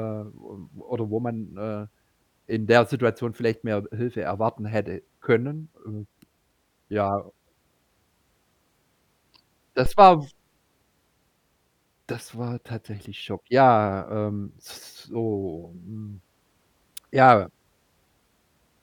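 Phantom power, or a similar supply, was switched on or off on a live input partway through this speech recording, and the sudden voltage step travelled through the coupling capacitors into the signal. The result is a phantom power thump: a deep, low-frequency thud starting at 9.86 s and dying away by 10.23 s, peaking at about -14 dBFS and decaying over roughly 83 ms.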